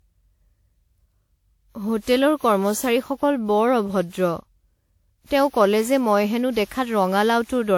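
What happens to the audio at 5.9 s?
At 5.9 s the speech has the swirly, hollow smear of generation loss, present throughout: likely about ten re-encodes, fitting WMA 1 at 96 kbit/s. Content reaches 20.1 kHz, so it isn't simple low-bitrate band-limiting.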